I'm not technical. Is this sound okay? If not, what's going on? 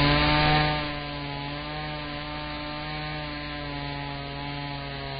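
No. For the whole clip the sound is dull and grainy, with nothing above about 4.9 kHz. The upper range that remains has a hissy, roughened texture, and sharp starts of sounds come out blurred. This is Vorbis compression, likely squeezed very hard: the fine detail up top was stored so crudely that it turned into noise. A plain treble cut would sound muffled but clean, while this sounds gritty.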